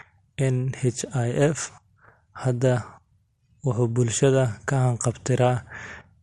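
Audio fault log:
throughout: MP2 compression, likely from a low-rate MP2 encode near 80 kbps; starved upper sub-bands switch off, making the speech dull and gurgly, with a ragged, flickering spectrogram top.
4.19 s: DAB burbling, brief short blips of noise where a small fraction of a percent of bit errors corrupt sub-band samples; the spectrogram shows isolated bright, band-limited blocks.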